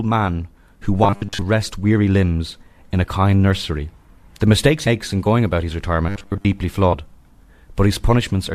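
Between 1.04 and 1.42 s, right after "man who", the playback likely ran short of fresh audio and kept repeating a roughly 10 ms buffer, so most of that stretch is recycled material while the real audio is skipped. The repetition imposes a fixed 100 Hz pitch, and the speech turns into a stiff, metallic, robotic buzz that only loosely tracks the words until "rest weary limbs in" resumes.

At 4.86 s, just before "in going about his", several compressed frames were never decoded, and about a tenth of a second of audio is missing. The jump fits a whole number of frames of roughly 23 ms.

From 6.09 to 6.45 s, right after "in going about his", the same robotic sound from repeated short buffers returns. Again the likely cause is a starved audio stream being filled by looping a brief chunk. The same rigid 100 Hz metallic drone replaces most of the natural speech there.

From 6.92 to 6.94 s, compressed frames are skipped a second time, dropping somewhat less audio, around 70 ms. 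The result is another point where the audio lurches forward.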